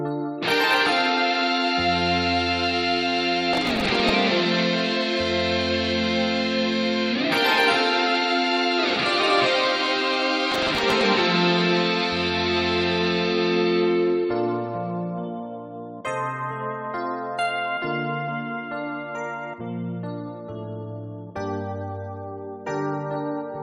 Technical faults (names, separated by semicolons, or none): processor overload crackle